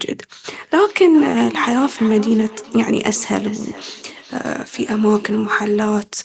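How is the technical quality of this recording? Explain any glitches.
The recording has one real problem: a feedback echo between two devices from 0.51 s to 6.01 s. A second device replays this microphone's signal, so each phrase returns about every 0.4 s, thinner and ringier, peaking about 16 dB below the speech. The top end stops around 8 kHz, which is just the call's microphone processing.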